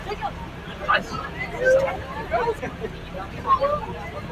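Noise suppressor applied to music or sounds runs through this recording of everyday sounds: a speech-oriented suppressor treats steady tones, ambience and decaying tails as noise and pulls them down while sharp onsets pass, so the level pumps by about 10 dB and the background thins and flutters between events. Audio missing between chunks is heard as abrupt skips at 0.99, 1.79, 2.59 and 3.39 s, each losing around a fifth of a second with the two sides butted together without silence. The even spacing of roughly 0.8 s fits one-second blocks shortened by the lost piece, so the likely cause is a recorder or processor dropping audio each time it closes one chunk and opens the next.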